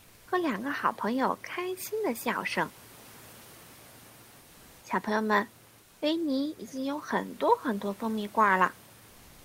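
A speech clip with room noise about 27 dB below the speech, in which a pause from 5.83 to 6.01 s (180 ms) has its real background replaced by comfort noise. The sender likely stopped transmitting under Opus discontinuous transmission, and the receiver filled the gap with synthetic noise about 2 dB quieter. On a spectrogram, that stretch shows a smoother, more uniform noise floor, about 32 dB below the loudest sound, with clean edges where the textured room noise stops and resumes.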